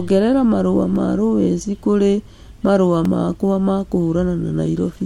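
Block of digital silence at 0.96 s, before "ma lowes kũrĩ marũa", and 3.05 s, before "makwa ma": 1.2 ms and 2.9 ms of samples drop abruptly to zero, likely from an unfilled output buffer (the second fits a 128-sample buffer), each heard as a click.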